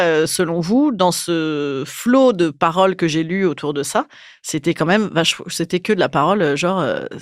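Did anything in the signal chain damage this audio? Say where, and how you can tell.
No, nothing along the chain from capture to playback has left an audible mark on this speech recording.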